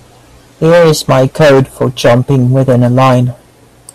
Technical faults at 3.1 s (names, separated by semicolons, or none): hard clipping